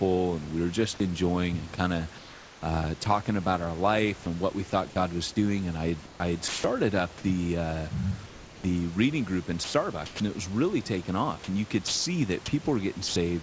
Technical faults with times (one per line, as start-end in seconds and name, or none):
1.76-3.06 sound chopped by the voice detector
4.70-4.72 sound dropped by the voice detector
6.06-6.64 comfort noise in place of the background
6.48-6.64 sound dropped by the voice detector
8.26-8.64 sound dropped by the voice detector
9.64-10.20 sound chopped by the voice detector
11.88-12.06 sound dropped by the voice detector
13.08-13.16 sound dropped by the voice detector